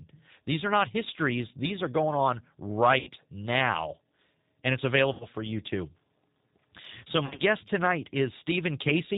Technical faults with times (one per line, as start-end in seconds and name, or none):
0.00-9.18 G.729 codec
2.99-3.11 VoIP packet loss concealed by the speech codec
5.13-5.26 VoIP packet loss concealed by the speech codec
7.26-7.42 VoIP packet loss concealed by the speech codec